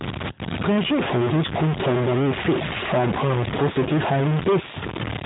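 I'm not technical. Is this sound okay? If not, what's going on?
No, not quite. Throughout the recording there's a noisy, distorted edge on the speech, and even the quiet gaps carry a gritty hiss. That's most likely a stuck bit, where one digit in the digital signal stays jammed on or off and scrambles the sound.

There's also a short hiccup from about 0.32 to 0.39 s. That's lost AMR speech frames. A few pieces of the phone call got damaged in transit, about 60 ms' worth, so the phone filled the gap by stretching and fading the last good sound.

The narrow, phone-like tone itself is just the normal mobile phone codec at work.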